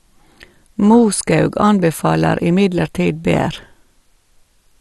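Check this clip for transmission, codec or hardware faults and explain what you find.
One codec fault runs through the whole speech clip. It is most likely MP2 compression. Nothing is left above 12.2 kHz, so the sound is dull. The upper sub-bands seem starved of bits and drop out, and the remaining bands are coarsely quantised. That gives a plainly audible gurgling, granular roughness. It fits a low bitrate near 64 kbps.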